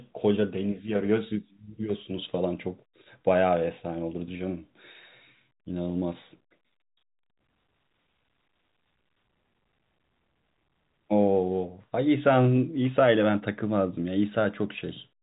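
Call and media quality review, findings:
No faults found; telephone-band speech, nothing above 3.8 kHz.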